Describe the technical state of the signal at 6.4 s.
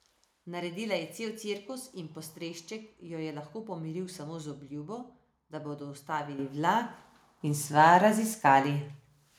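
A microphone volume step-up occurs at 6.39 s: the call software judged the input too quiet and raised the device's microphone level in a single jump of about 8 dB, so speech and background noise both become abruptly louder together from that instant.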